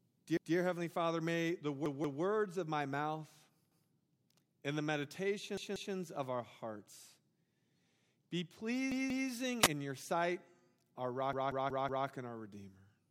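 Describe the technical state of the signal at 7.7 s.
At 7.7 s the speech signal is intact, with no audible technical fault.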